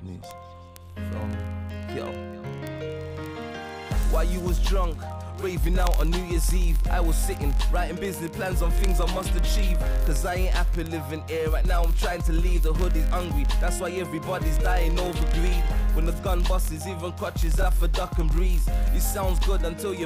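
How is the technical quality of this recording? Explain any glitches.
Quality is poor. Word clock ticks run from 0.11 s to the end. An unlocked receiver clock drifts about 0.1%, slipping one sample roughly every 20 ms. The result is sharp, uneven ticks.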